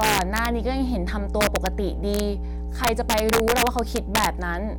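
A steady mains hum at 60 Hz runs under the speech from start to finish, almost as loud as the speech itself. A ground loop or nearby transformer has leaked the power line into the signal path, giving a constant low drone with some low harmonics. On a spectrogram it shows as an unbroken bright line at 60 Hz with weaker lines at its multiples, and the waveform carries a visible slow ripple even in pauses.

Integer overflow strikes four times: from 0.01 to 0.46 s, 1.41 to 1.67 s, 2.14 to 2.20 s, and 2.84 to 4.26 s. The signal ran about 1 to 4 dB past the largest value the integer format can hold, and instead of being limited it wrapped around to the opposite extreme. The loud stretches sound like harsh, violent cracking, sharper than clipping. In the waveform, peaks jump abruptly from full positive to full negative, and the spectrogram shows broadband vertical streaks.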